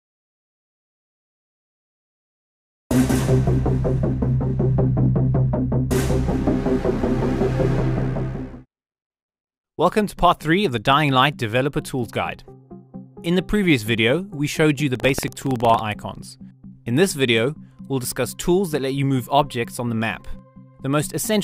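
Buffer tearing runs from 14.91 to 15.80 s. Writer and reader have slipped within the ring buffer, so a small sliver of each period carries audio roughly 150 ms stale, hard-joined on both sides. The result is a rattling buzz near 21.5 Hz, which fits a 2048-sample buffer.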